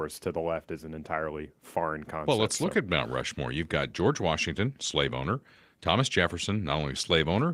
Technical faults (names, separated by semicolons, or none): none